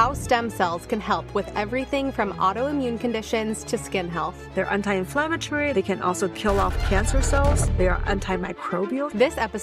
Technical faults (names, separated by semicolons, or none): none